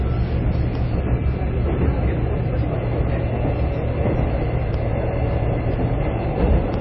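MP3 compression, throughout: nothing above 5.8 kHz and plainly audible watery, swirling smear, likely from an MP3 encoder starved of bits, which fits about 24 kbps.

Periodic USB or driver dropouts, from 0.75 s to 6.74 s: brief ticks one second apart, each roughly half a millisecond of sound lost to silence as the driver stalls.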